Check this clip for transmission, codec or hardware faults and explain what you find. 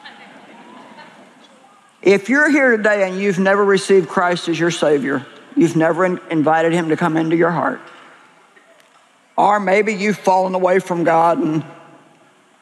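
Nothing here sounds off; I couldn't pick out any transmission, codec or hardware trouble anywhere in the audio.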